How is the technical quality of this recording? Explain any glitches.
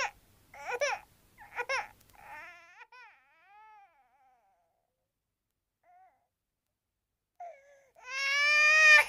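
Two glitches stand out, both zipper noise. From 2.34 to 2.79 s the level drops by roughly 25 dB, and from 7.51 to 9.00 s it rises by roughly 25 dB. Each change moves in coarse, unsmoothed steps, about 300 a second, and each step leaves a tiny click. The result is a buzzy zipping over the fade. On a waveform the envelope looks like a staircase. On a spectrogram, faint evenly spaced vertical lines run through those spans.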